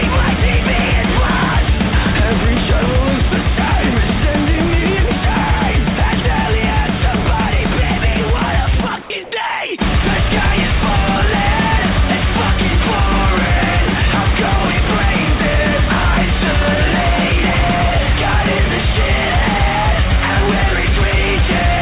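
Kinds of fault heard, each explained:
Sound dropped by the voice detector: The sender's voice detector likely mistook real sound for background and stopped transmitting, so the receiver substituted generated comfort noise. From 9.02 to 9.10 s, an 80 ms stretch is replaced, and about 60 ms of actual sound vanishes under steady, featureless noise before transmission resumes. All of this sits within the call path's 4 kHz band limit.
Comfort noise in place of the background: Discontinuous transmission likely paused sending during a gap, and the receiver filled it with synthetic noise modelled on the background. From 9.24 to 9.32 s, the real background, sitting about 20 dB below the loud parts, is swapped for 80 ms of smooth, textureless hiss. Its level matches the surrounding background, so there is no drop in loudness, only a brief loss of natural detail and variation.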